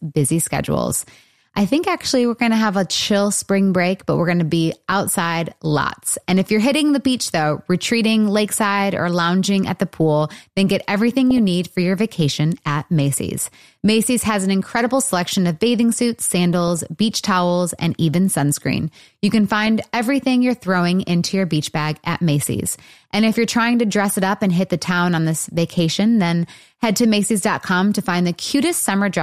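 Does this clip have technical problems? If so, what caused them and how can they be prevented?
Yes. The speech has DAB burbling in three short bursts: 11.31 to 11.38 s, 16.53 to 16.81 s, and 19.52 to 19.67 s. Weak reception let bit errors slip past error correction into the MP2 audio. Corrupted samples put short blips of noise into single sub-bands. The error rate points to a few tenths of a percent. Better reception prevents it: use a stronger antenna or placement, or move closer to the transmitter.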